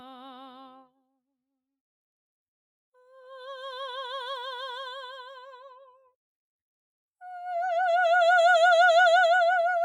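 No technical faults can be heard in this music.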